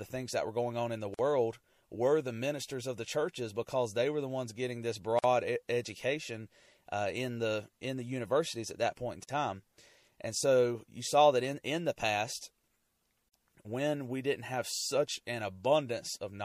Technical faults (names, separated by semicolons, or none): MP3 compression; gap at a join of encoded pieces